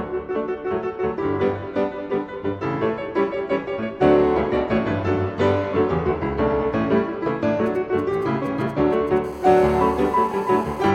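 The clip is interrupted by interference from a nearby 2G phone. From 7.66 to 9.18 s, GSM signalling bursts produce galloping ticks and short 217 Hz buzzes, well below the sound, as the phone's radio pulses are rectified. From 9.24 to 10.90 s, a steady GSM phone buzz follows at 217 Hz. It is hard and raspy, about 29 dB below the sound, and fits a phone in an active call.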